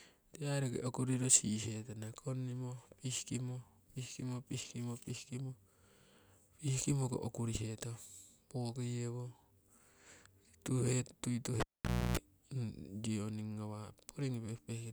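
At 11.6 s a pop drops the speech into near silence for about 0.52 s, including 0.3 s of 60 Hz buzz: a cable pulled and plugged in.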